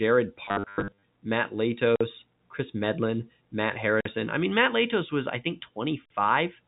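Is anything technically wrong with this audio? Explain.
Yes. From 0.45 to 1.03 s the speech breaks into packet loss with the last packet repeated. About 400 ms of audio goes missing, scattered across those 580 ms, with the longest run near 90 ms. The receiver fills each hole by replaying the previous packet, and the loops seldom line up with the pitch. The lost and repeated stretches together suggest roughly 10 ms packets, which gives a stuttering, robotic buzz near 100 Hz. On a spectrogram this shows as evenly spaced vertical lines with smeared, frozen harmonics. In the waveform, short identical segments repeat side by side.

There are also gaps between chunks at 1.96 to 2.01 s, 4.01 to 4.05 s and 6.05 to 6.10 s, each about 48 ms long and arriving every 2 s. They come from the audio being handled in 2-second blocks, with a short silence left at each boundary. No material is lost, but the flow stops abruptly at each join. 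A waveform shows flat, hard-edged dropouts to silence, and a spectrogram shows narrow blank columns at regular spacing. The G.711 A-law telephone coding at 64 kbps leaves its narrow, sub-4 kHz band.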